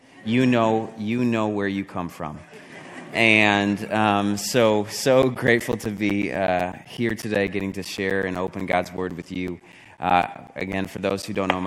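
From 5.22 s to 11.36 s the audio suffers periodic USB or driver dropouts: every 0.125 s, eight times a second, roughly 10 ms of signal vanishes and is replaced by silence, around fifty gaps in all. Something is stalling the bus or driver on a fixed schedule. The result is a steady ticking that is audible only where there is sound. The strict, metronomic spacing distinguishes it from irregular network packet loss or random buffer underruns.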